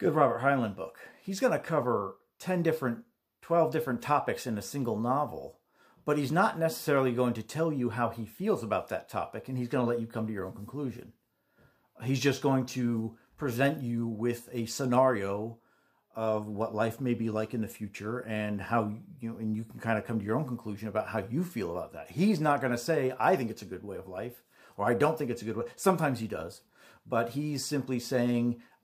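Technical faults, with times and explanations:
No technical faults can be heard anywhere in the clip. There is nothing to mark with a time or to explain.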